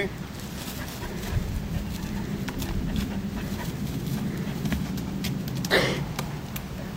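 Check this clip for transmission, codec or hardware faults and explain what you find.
Nothing here sounds wrong; I couldn't hear any transmission, codec or hardware trouble anywhere in this audio.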